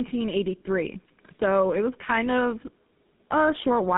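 Throughout, the speech sounds rough, muffled and warbly, with nothing above 3.8 kHz. This is tandem speech coding, which fits two low-rate speech codecs in a row, the second re-coding the first's degraded output.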